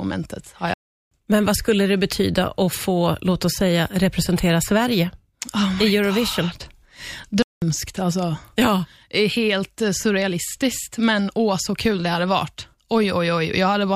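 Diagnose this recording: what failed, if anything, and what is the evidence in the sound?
Playback stalls at 0.74 s and 7.42 s: the speech cuts to silence mid-flow for about 377 ms, then about 196 ms, before resuming where it stopped. At the playback stage, the player likely ran short of buffered data or had its output thread blocked.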